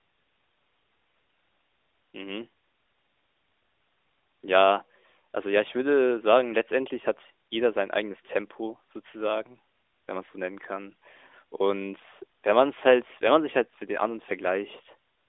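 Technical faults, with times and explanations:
No technical faults are present, so there are no times or explanations to give.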